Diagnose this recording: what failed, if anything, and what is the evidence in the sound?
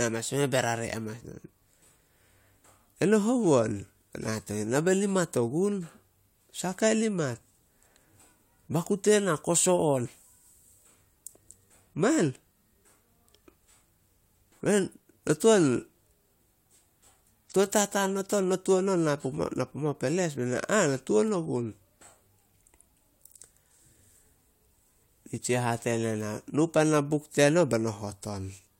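No fault can be heard.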